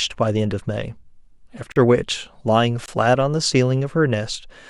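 A speech recording with two blocks of digital silence, at 1.72 to 1.76 s (40 ms) and 2.86 to 2.88 s (21 ms). Each cuts out and back with no fade, pointing to output buffers not filled in time.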